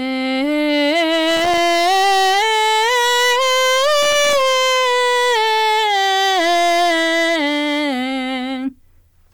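From the very start the music is hard clipped, pushed about 14 dB past what the chain can pass, so nearly a third of it gets flattened into a constant harsh fuzz. Then at 1.31 to 1.58 s and again at 4.02 to 4.41 s there's loose connector crackle, a flaky contact chopping the signal into irregular scratchy bursts.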